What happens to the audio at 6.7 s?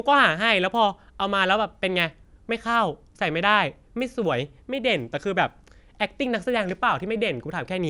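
At 6.7 s the resampler restarted on every block still ticks at 4 Hz, every 250 ms across the whole speech clip. Each block of the 24 kHz to 48 kHz conversion is converted in isolation, leaving an edge error.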